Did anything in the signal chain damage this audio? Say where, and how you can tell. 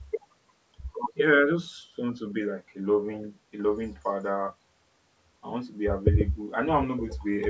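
No, nothing in the signal chain stood out as damaging on listening; the speech has only the trimmed lowest bass and the 8 kHz top limit of ordinary call microphone processing.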